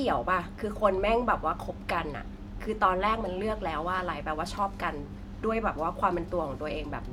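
Nothing goes wrong anywhere in this bit of speech, so there's no fault to point to at any moment.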